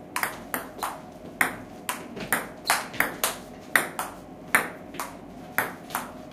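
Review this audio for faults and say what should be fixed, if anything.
Nothing in this audio needs to be fixed, as the review turns up no faults.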